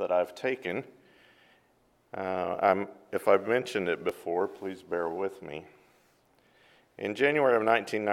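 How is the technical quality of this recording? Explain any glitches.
There's one glitch: an overlap between stream segments at about 4.09 to 4.11 s. Two chunks, which seem to run 2-second segments, claimed the same stretch of time, and the player trimmed roughly 20 ms that wasn't actually duplicated. The waveform jumps there, so you hear a small click or skip.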